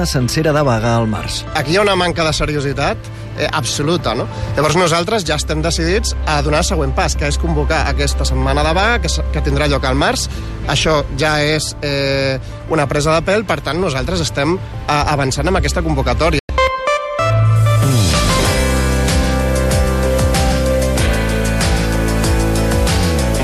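At 16.39 s a digital broadcast dropout mutes the audio for about 0.1 s. A lost signal or corrupted frames made the receiver fade out in 3 ms and stay silent until good frames returned, losing roughly four frames.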